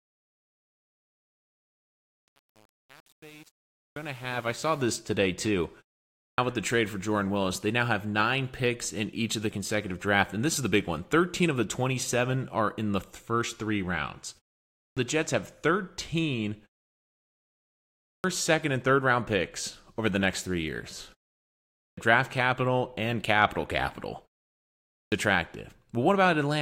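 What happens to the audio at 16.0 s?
At 16.0 s the speech plays through intact, with no dropout, click, distortion or level change at that moment.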